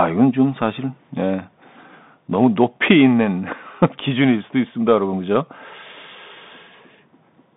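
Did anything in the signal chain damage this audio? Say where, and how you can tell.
Yes, at the codec stage: a Bluetooth CVSD headset codec runs throughout. Nothing passes above 3.8 kHz, and the line band is 150 Hz to 3.7 kHz. A one-bit delta coder fits a 64 kbps link. Unlike a plain narrowband filter, it adds granular hiss, scratchy s sounds, and distortion where loud highs outrun the adaptive step size.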